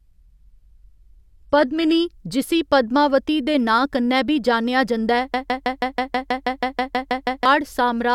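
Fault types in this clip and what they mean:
Adaptive stream starting at a low bitrate: The player opened on a low-quality version of the stream and switched up once it had measured the connection, which fits a move from HE-AAC at 24 kbit/s to AAC-LC at 96 kbit/s. Until 2.0 s the speech is band-limited with nothing above 14.9 kHz, then quality jumps suddenly without a gap.
Broken-record loop: A stall, likely in the player or stream, kept re-sending the last fragment held. Right after "कन्नै बी जान्नेआ जंदा", a 0.16 s piece repeats 13 times back to back from 5.34 to 7.46 s, and the speech that belonged there is lost.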